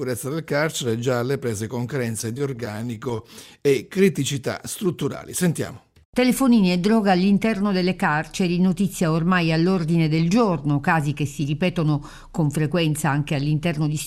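From 2.21 to 3.36 s the sound hitches over and over, about twenty tiny catches, each no longer than 18 ms, so the passage drags and stutters rather than flowing. These are repeated stalls (stutter): audio was arriving late or slower than it was being played, and the jitter buffer kept running dry. Each time, the last bit of sound was stretched to cover the wait, about 208 ms in all and roughly a fifth of that stretch, with nothing actually lost.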